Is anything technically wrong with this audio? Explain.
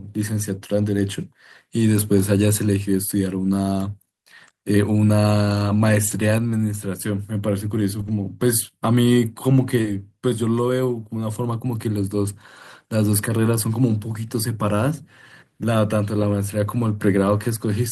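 Yes, there are two packet-loss faults in this speech.

Lost packet rebuilt from error correction at 6.07–6.17 s, 7.99–8.09 s, 9.84–9.86 s, 14.14–14.16 s and 16.22–16.24 s: packets went missing, and the decoder played the low-bitrate copies carried in the following packets. The first two spans each have about 60 ms of rebuilt audio, which fits three lost packets. The others last 20 ms each, which fits one lost packet. There is no gap, but those moments sound briefly rougher and noisier.

Short concealed packet loss at 9.81–9.86 s: about 20 ms of audio did not arrive in time. The decoder extended the preceding sound for about 27 ms, then blended back into the real signal, leaving a brief smear or wobble.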